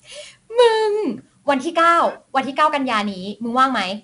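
From start to end, the speech carries 4-bit ADPCM compression: each sample is coded as a small adaptive step from a prediction, so a gritty hiss rides on every loud syllable and falls away in quieter moments, unlike steady dither noise. Nothing reaches above 10.6 kHz, which fits about 88 kbps.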